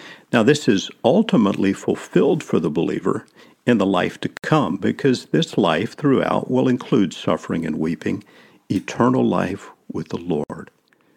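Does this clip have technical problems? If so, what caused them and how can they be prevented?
Yes. There is a gap at a join of encoded pieces after "in the life to" at 4.37 s (66 ms) and after "life with" at 10.44 s (60 ms). The pieces are about 6 s long. Each piece kept its encoder delay and end padding. Trim that delay and padding before joining, or encode the speech as one continuous stream.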